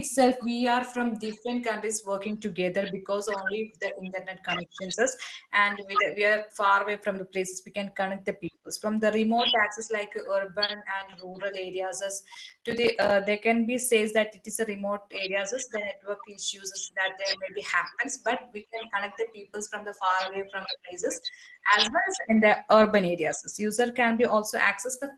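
At 10.65 s the speech briefly hangs, one sound held about 30 ms too long with a faint buzzy smear, and at 11.10 s the same thing happens for about 20 ms. Both are short stalls from a late packet. The jitter buffer ran dry, so the receiver stretched the last sound until the packet turned up, then resumed where it left off. Nothing is lost, but playback slips later each time, audible against the call codec's band-limited sound.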